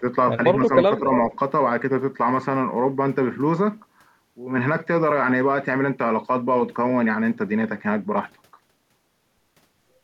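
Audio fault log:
0.00–0.04 s and 0.89–1.04 s: speech suppressed in double talk. The speech briefly dips by around 10 dB. An echo canceller likely turned down this side's speech along with the loudspeaker echo during overlap.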